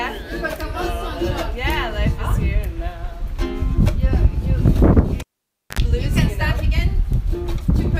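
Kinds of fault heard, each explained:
Cable pulled and plugged in, from 5.2 to 5.8 s: a live lead is yanked from its socket and pushed back while the signal is still running. Pulling it out gives a pop, and the audio falls to near silence for about 0.55 s. As the plug goes back in, only the tip makes contact at first. It picks up a short burst of 50 Hz mains buzz lasting about 73 ms, then a second pop as the connection seats and the sound returns.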